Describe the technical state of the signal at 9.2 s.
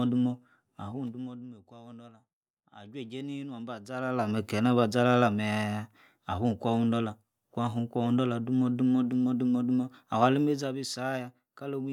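At 9.2 s the speech signal is intact, with no audible fault at that moment.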